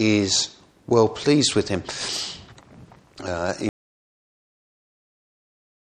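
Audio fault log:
3.69 s to end: audio dropout to silence. The sound stops abruptly mid-flow and stays silent, with no room tone or noise floor left. That sets it apart from a fade-out or noise gate. The likely cause is lost input while recording continued.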